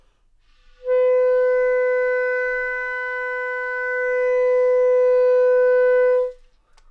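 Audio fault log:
No faults can be heard anywhere in this recording of sounds. Nothing in it calls for a timed entry.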